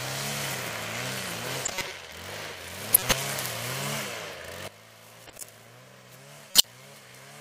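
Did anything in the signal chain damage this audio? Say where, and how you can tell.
Yes. Corrupt frames were decoded at 1.65 to 1.91 s, 2.93 to 3.13 s, 5.27 to 5.43 s and 6.51 to 6.64 s. This is a codec-stage fault. Each event is a short glitch unrelated to the surrounding sound, lasting several frames. The bursts at 2.93 s and 6.51 s are the loudest, peaking around -5 dBFS. Damaged bitstream data was decoded anyway, so misread gains and codes put energy at the wrong frequencies.

A sudden gain jump comes at 4.68 s, where the level drops by about 16 dB and stays down to the end. The sound and its background noise fall together in a single step with no fade, so something scaled the digital signal between one sample and the next. The likely cause is a gain setting or bit shift applied without a ramp, somewhere in the processing or playback stage.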